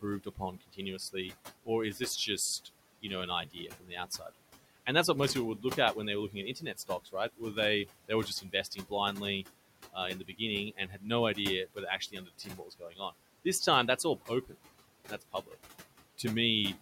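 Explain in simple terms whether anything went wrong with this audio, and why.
Noise suppressor artifacts run through the whole recording. The suppressor keeps estimating which parts of the sound are steady background noise and turns those down, moment by moment. The quiet room noise underneath the speech is pushed down hard in the gaps and comes back up whenever someone talks.

There are also four stretches of speech cut by the noise suppressor. Here the suppressor mistook parts of the talking for noise and turned them down along with the background, so soft consonants, word endings or quieter syllables sound swallowed or faint. It happens from 0.02 to 2.01 s (about 0.4 of a second affected in total), 2.65 to 4.3 s (about a third of a second), 6.3 to 13.13 s (the longest, about a second and a half in total) and 13.97 to 15.55 s (about 0.4 of a second).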